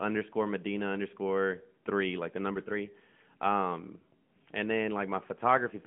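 From the first second to the last, the speech carries the sound of an AMR narrowband mobile codec, the old 2G/3G phone path. Everything sits in a telephone band of roughly 150 Hz to 3.4 kHz, with nothing at all above 3.5 kHz, so it's thin and boxy. The vocal-tract model is plainly straining, giving a buzzy, synthetic edge even at around 10.2 kbps.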